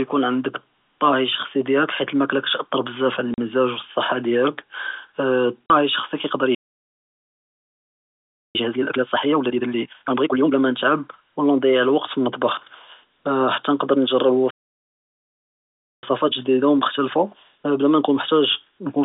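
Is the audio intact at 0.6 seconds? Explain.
Yes, the speech at 0.6 s is intact, carried cleanly on the G.711 telephone line with no break, click or dropout at that moment.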